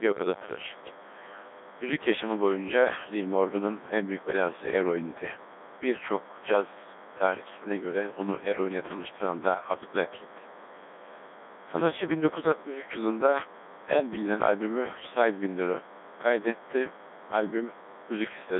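From start to finish, a DECT cordless phone buzz sits under the speech. It is a thin, steady buzz at 100 Hz, rich in harmonics. A nearby DECT handset or base sends a short radio burst every 10 ms. The audio circuit rectifies each burst, so the pulse train becomes sound. The buzz runs at roughly 25 dB below the speech.

The speech also passes through the Codec 2 vocoder for the whole clip. The decoder rebuilds the speech from sine waves using only pitch, voicing, energy and a spectral envelope. The original waveform is gone. The damage is heavy, which fits a very low rate near 1.2 kbit/s. The speech sounds robotic and buzzy. The band runs from 250 Hz to 3.5 kHz, with nothing above 3.8 kHz.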